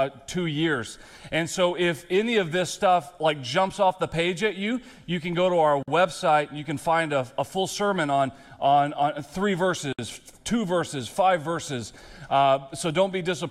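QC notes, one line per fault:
5.83 s and 9.93 s: gap at a join of encoded pieces. Separately encoded segments were joined without trimming the encoder's start delay and final-frame padding, so silences of about 48 ms and 60 ms open in continuous sound, with edges smeared by the codec, before the audio resumes where it left off.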